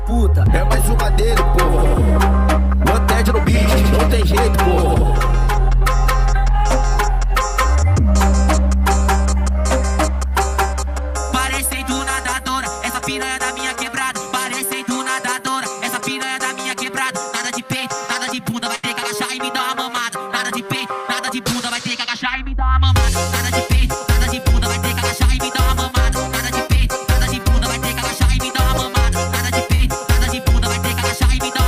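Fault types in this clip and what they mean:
burst of packet loss: From 18.75 to 18.85 s, roughly 80 ms of audio didn't arrive in time. The receiver carried the last sound forward for about 76 ms, fading it as it went, then jumped ahead with that stretch simply gone.
short concealed packet loss: At 29.75 to 29.81 s a smaller hole of about 40 ms got patched. The preceding sound was extended for around 44 ms and blended back into the real signal, so you hear a quick smear instead of what was actually there.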